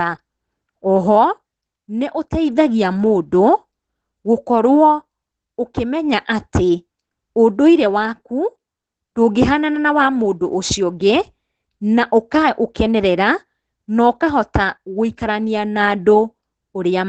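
The speech throughout sounds muffled and slightly hoarse, with a faintly robotic edge, and nothing is heard above about 9 kHz. This is Opus voice compression running in its SILK linear-prediction mode at wideband. The coder models the voice with a short-term predictor and codes the leftover excitation coarsely, so breathiness and fine texture are lost. The plainly audible damage fits a low bitrate of around 12 kbps with 20 ms frames.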